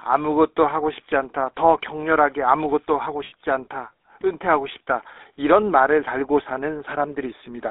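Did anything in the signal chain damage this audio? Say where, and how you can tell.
Yes, at the codec stage. The whole clip carries the GSM full-rate codec's signature: the band stops near 3.7 kHz with nothing below about 300 Hz, and the speech has a plainly audible buzzy, gravelly roughness, which fits a 13 kbps full-rate coder. That grit comes from driving a vocal-tract model with sparse, regularly spaced pulses. Plain band-limiting, such as an analogue phone line, would sound muffled but smooth, not rough.

The network stage adds lost GSM frames from 3.24 to 3.33 s. For about 80 ms, which fits four lost 20 ms frames, the sound does not drop out. The decoder keeps repeating the last good frame, so the speech turns into a brief rough, metallic ring. A simple dropout would go silent or click instead, and a jitter-buffer stretch would smear the audio smoothly rather than ring.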